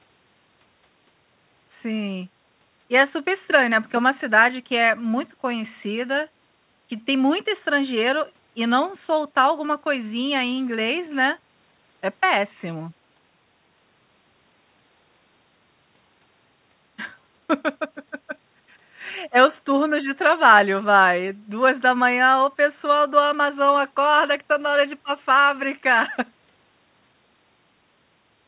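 No faults are present; the speech comes through a G.711 mu-law call path at 64 kbps, which leaves nothing above 4 kHz and carries that codec's ordinary coding noise.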